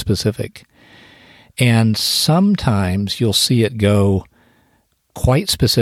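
No audible technical faults anywhere in the speech recording.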